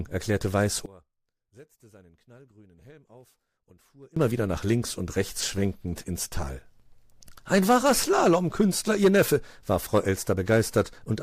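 Speech that, from 0.86 to 4.17 s, collapses to a faint residue about 27 dB down before "wieder nach links und", likely one channel inverted, cancelling the centred content in mono.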